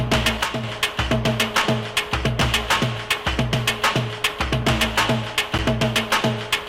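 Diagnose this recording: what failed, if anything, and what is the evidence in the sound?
From 0.43 to 0.64 s one channel drops out. The sound falls abruptly by about 6 dB and recovers just as sharply about 0.2 s later, which is what a mono sum does when half its contribution vanishes. Material common to both sides survives at half amplitude, and anything present only on the missing side is gone for that stretch. The stage is likely the analogue wiring, such as an intermittent connector or cable on one leg of the stereo pair.

At 5.58 s there is a gap between stream segments, a hard-edged hole of roughly 10.5 ms of silence with abrupt onset and release. This points to the playback stage stitching together consecutive segments, which fits 2-second segments here, whose time stamps do not quite meet. The player pads the mismatch with silence rather than discarding anything, so no audio is lost. 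The timeline simply stretches by that small amount at the boundary.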